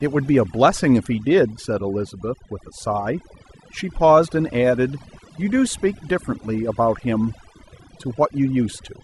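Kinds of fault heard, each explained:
Overdone noise removal: A noise reducer was pushed far too hard across the whole clip. It tracks a profile of the background noise. Any frequency band that drops close to that profile gets cut deeply or muted. The gaps between phrases fall almost silent, dotted with twinkling specks where stray bands flick on and off. The softer parts of the speech are removed along with the noise.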